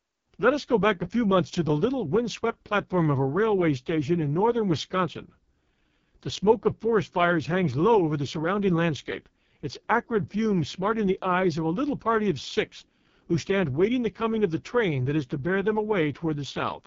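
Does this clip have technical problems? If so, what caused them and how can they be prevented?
Yes. The speech runs through an AMR wideband (HD Voice) codec from start to end. It sounds rough and raspy, which points to the 6.6 kbit/s lowest mode. Above 6.4 kHz only shaped noise remains, and nothing sounds above 7.4 kHz. Prevent it by running AMR-WB at 12.65 kbit/s or higher.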